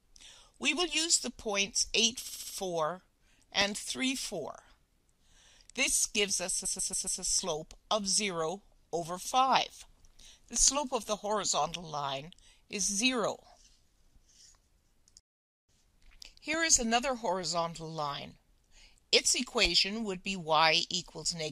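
At 2.25 s the sound stutters until 2.53 s. These are repeated frames. A block of about 70 ms plays four extra times, adding 0.28 s. At 6.64 s a 139 ms block repeats four more times, running to 7.2 s and adding 0.56 s.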